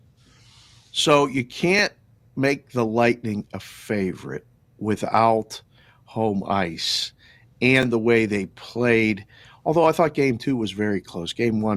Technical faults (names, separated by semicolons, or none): overlapping chunks